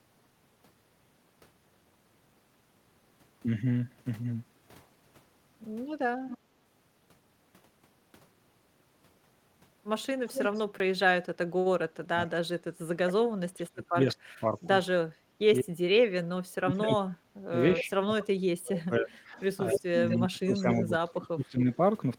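From 6.28 to 6.38 s there is an echo leak. An echo canceller likely failed to remove its loudspeaker pickup, so a faint copy returns about 230 ms late, about 15 dB below the speech. It returns louder at 10.26–10.6 s, about 5 dB down and delayed 235 ms.

At 10.79 s there is a repeated buffer. Fresh audio arrived late, so a tiny chunk, which fits a 256-sample buffer of about 5 ms, played two extra times, making a click or brief buzz.

From 11.89 to 21.67 s, speech is suppressed in double talk. The canceller likely could not separate the talker from the echo and turned both down, so the speech dips by up to about 35 dB over about 7 s in total.

Within that stretch the echo leaks back at 17.75–17.82 s and 19.4–20.84 s, delayed 245–248 ms and about 5 dB down. It returns once more at 21.72–21.76 s, faintly, about 30 dB down and 250 ms late.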